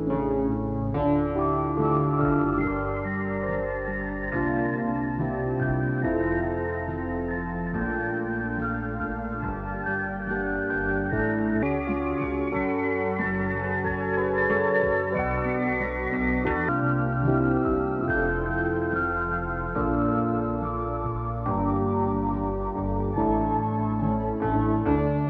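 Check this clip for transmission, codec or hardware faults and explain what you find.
One fault stands out. From 11.63 to 16.69 s there's a section at the wrong speed: it runs 1.3 times fast, likely from a clock mismatch, so everything sounds hurried and roughly five semitones higher.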